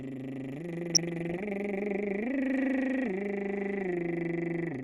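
A music clip that sounds dull and granular from start to finish, with a gurgling edge. The likely cause is MP2 compression at a low rate, something like 80 kbps. A spectrogram shows the upper sub-bands cut off above a ragged ceiling, blocks flickering in and out. From 0.94 to 1.46 s, DAB burbling adds short noise blips and level jumps in single sub-bands over the music. Bit errors, at a rate well under one percent, slip into the MP2 data and make single sub-bands jump in level. On a spectrogram this shows as bright rectangular patches lasting up to a frame, across 22 frames of that half-second.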